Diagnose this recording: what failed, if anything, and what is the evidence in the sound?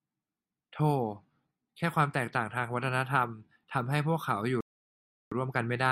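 A rebuffering stall hits the speech from 4.61 s to 5.32 s. It is a playback-stage failure: the player drained its buffer of downloaded audio faster than new data arrived, so it halted output. The evidence is a clean drop to silence lasting about 0.71 s, after which the speech picks up at exactly the point where it stopped. No audio is missing or skipped, but the stall adds 708.5 ms to the running time.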